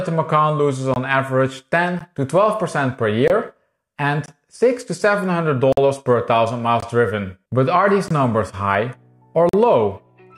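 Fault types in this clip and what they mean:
Block of digital silence: the signal drops to silence and snaps back with no fade, the signature of an output buffer not filled in time. Eight gaps fall between 0.94 and 9.49 s. Most last 21.3 ms, which fits a 1024-sample buffer at 48 kHz, and others run 13.6, 42.7 and 48.4 ms. The waveform shows flat zero-line holes with hard edges. A spectrogram shows blank vertical strips.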